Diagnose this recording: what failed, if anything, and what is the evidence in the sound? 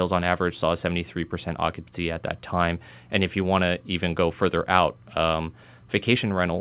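Nothing failed here.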